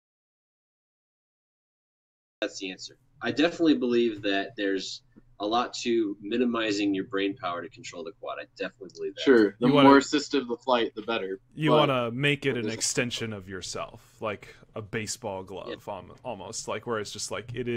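The clip opens in an audio dropout to silence. From 0.00 s to 2.42 s there is nothing at all, not even room tone. The gap is already under way when the clip begins. The sound then comes in abruptly at 2.42 s, as if mid-flow. The cause is likely a lost input, such as a disconnected device, a failed link or a stray mute, while recording carried on writing silence. Whatever occurred during that stretch is gone.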